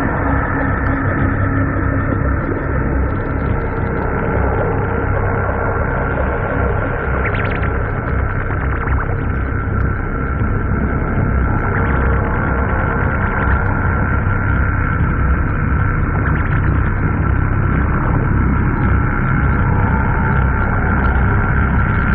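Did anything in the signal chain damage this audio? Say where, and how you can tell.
No, nothing in the chain damaged this audio.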